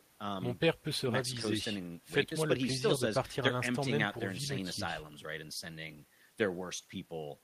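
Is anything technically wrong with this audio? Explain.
No, nothing technically wrong turns up in this speech recording; it all sounds just as it should.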